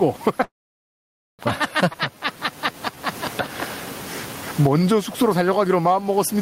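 Throughout, the level swings by roughly 20 dB, flattening the dynamics. This gain pumping likely comes from gain set far too high, with a fast limiter clamping it back down. The room noise sits about 32 dB below the speech.

From 0.43 to 1.42 s there is a call audio freeze. A short fading buzz gives way to near silence for about 0.9 s, then the sound resumes where it stopped. The likely cause is delayed packets draining the jitter buffer, so this inserts a gap without losing anything.

Between 1.93 and 1.97 s the sound skips ahead, jumping forward almost seamlessly past roughly half a second of missing audio, since later audio was already waiting.

From 1.98 to 2.97 s, and again from 4.62 to 6.35 s, the sound drags without changing pitch. It plays at 89% and then 92% speed, adding 118 ms and 137 ms. In this jitter buffer slow-down, repeated pitch periods rebuild the buffer's reserve.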